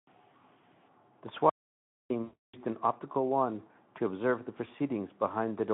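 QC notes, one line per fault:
1.50 to 2.10 s, audio dropout to silence: the speech cuts off mid-flow and returns after about 0.6 s of silence, with no room tone underneath. The input was most likely lost while writing continued with silence, so whatever was spoken there is gone. On the waveform this is a flat line. On the spectrogram it is a fully blank column, with even the noise floor missing and hard vertical edges at both ends.
2.23 to 2.57 s, VoIP packet loss concealed by the speech codec: just before "an optical wand to", about 0.3 s of packets went missing, which fits a run of 20 ms frames. The decoder kept extrapolating from its last pitch and filter while lowering the gain, so the sound smears into a buzzy tone or coloured noise that fades. The spectrogram shows frozen content dimming frame by frame inside the narrow Speex band of roughly 150 Hz to 3.5 kHz. The waveform shows a shrinking envelope rather than normal speech modulation.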